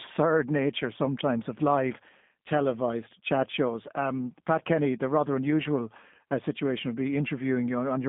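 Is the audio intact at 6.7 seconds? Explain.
No. G.729 codec damage runs through the whole clip, including 6.7 s. Speech is rebuilt from a vocal tract model, which fits an 8 kbit/s G.729 coder. It sounds rough and synthetic, with nothing above 3.7 kHz.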